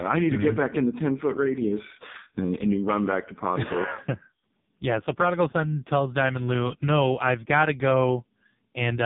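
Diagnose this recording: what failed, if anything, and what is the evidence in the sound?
The speech sounds buzzy and synthetic throughout, with nothing above about 3.8 kHz. That points to the AMR narrowband mobile codec at the codec stage. Heavy damage fits its lowest modes, near 5 kbps, where too few pulses excite the vocal-tract model in each frame.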